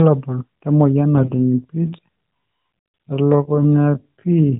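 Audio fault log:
1.14–1.32 s, AMR bit errors: The sound turns hoarse and gargly while pitch and level roughly hold. A few percent of bits, likely flipped, scramble the pulse and gain details across several narrowband frames.
1.60 s to end, time-stretched section: The pace suddenly slows to 0.565 times speed with pitch unchanged. Short pieces likely repeat to fill time, so the audio drags.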